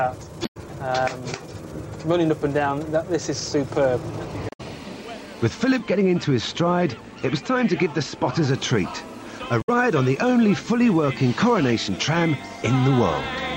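Damaged data in the compressed stream breaks through three times, at 0.42–0.57 s, 4.47–4.61 s and 9.61–9.69 s. Each time, corrupted frames make the decoder misread the data and lose sync, so it hunts for the next valid frame header, and each break is heard as a brief glitch. De-emphasis applied wrongly dulls the audio from 5.79 to 8.50 s. A treble-cut filter meant to reverse pre-emphasis was applied either where none existed or a second time, tilting the response smoothly downward to about 8 dB lower at 10 kHz than at 1 kHz, which muffles that stretch.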